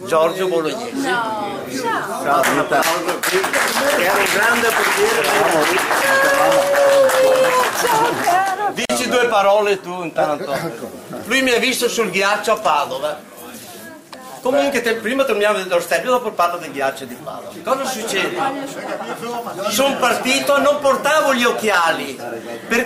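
At 8.85 s a gap at a join of encoded pieces cuts a gap of about 44 ms into the sound, from encoder start delay and end padding left untrimmed. Edges are smeared.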